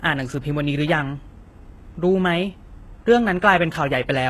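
The speech here has been squeezed through a low-bitrate encoder, likely HE-AAC compression, at a rate that fits roughly 16 kbps. Such a coder keeps only the lower spectrum in detail and regenerates the treble by copying lower bands upward under a coarse envelope. Throughout the recording the damage is plainly audible. The top end stays bright yet synthetic, with s sounds gritty or lispy, and nothing survives above 12.3 kHz.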